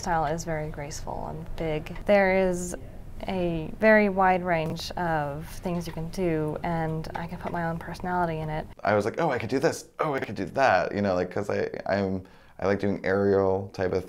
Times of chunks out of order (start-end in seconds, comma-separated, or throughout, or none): 4.66-4.72, 10.18-10.24